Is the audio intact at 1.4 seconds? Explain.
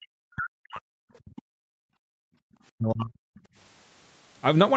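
No. Speech suppressed in double talk covers 1.19 to 1.63 s: the speech sinks by up to about 40 dB, in pieces over roughly 0.4 s, likely because an echo canceller facing simultaneous talk mistook the near talker for loudspeaker echo and attenuated it.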